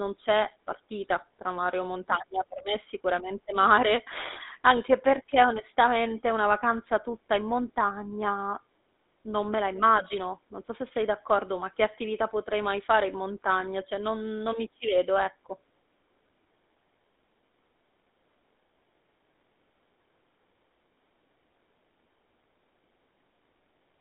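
Throughout the clip the speech carries GSM full-rate codec damage. A pulse-excited vocal-tract model rebuilds the speech, consistent with a 13 kbps full-rate coder. The result is a plainly audible buzzy, gravelly roughness, with the band confined to roughly 250 Hz to 3.7 kHz and nothing above 3.8 kHz.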